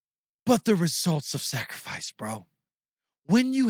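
At 2.03 to 2.09 s there is a lost packet rebuilt from error correction. The sound does not drop out. Instead, a short stretch turns rougher and noisier. About 40 ms of the audio was rebuilt, which fits two lost 20 ms packets. The decoder played the low-bitrate copies of those packets that had arrived inside the packets that followed them. Because those copies hold far less detail, the speech loses fidelity until normal packets resume.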